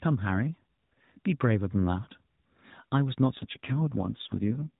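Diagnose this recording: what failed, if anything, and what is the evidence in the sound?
AMR rate drop at the codec/network stage: from 3.36 to 4.76 s the speech turns buzzy and synthetic with no gap, consistent with dropping from 12.2 to 4.75 kbps.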